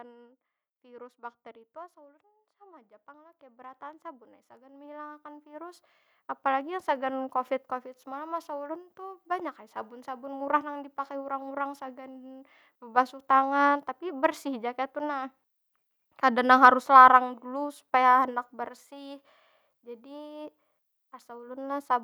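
From 2.58 s to 5.89 s the level climbs steadily. This is automatic gain rising. The gain control judged the input too quiet and kept turning it up, by about 13 dB in total. The change is gradual, spread over more than three seconds. The speech and the background noise grow louder together, so the room tone swells along with the talker. There is no sudden jump, just a slow upward ramp.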